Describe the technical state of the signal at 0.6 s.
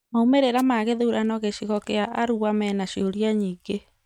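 A brief swish of static breaks through from 0.57 to 0.63 s, just before "ma gĩthurano gĩcigo gĩa", a wireless microphone noise hit. The analogue FM radio link faded as reflected signals cancelled, letting receiver noise surge up over the speech for those few tens of milliseconds.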